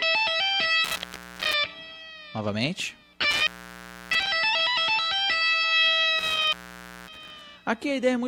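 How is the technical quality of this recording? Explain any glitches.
The recording is marred by three dropouts from an intermittent contact, at 0.84–1.54 s, 3.31–4.27 s and 6.19–7.41 s. Each time a loose plug or cable briefly breaks the signal path, the sound cuts out for about 0.47 s, 0.65 s and 0.55 s, with crackle at the edges and faint hiss in between. A waveform shows abrupt near-flat gaps with spiky edges, and a spectrogram shows vertical broadband streaks around empty bands.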